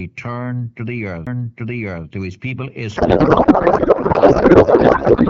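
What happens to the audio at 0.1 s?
Nothing goes wrong at 0.1 s; the audio is intact there, carried through an AMR wideband (HD Voice) codec path at 12.65 kbit/s with no fault at that moment.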